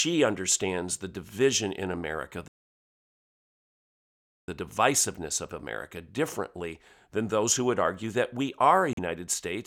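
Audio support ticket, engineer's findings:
Playback stall, 2.48–4.48 s: speech drops to silence for 2 s, resumes at "divisiveness of". Likely player buffer underrun or blocked audio thread halting output until recovery.

Bluetooth stall, 8.93–8.99 s: 41 ms dropout after "that we are a". Likely radio interference delaying packets, headphone buffer draining until retransmissions arrived.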